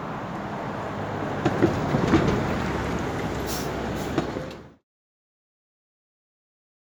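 Nothing here is a technical fault; the sound just eases away in a gentle, deliberate fade that starts around 4 s and is gone by 4.85 s, with no click or hard edge at the end.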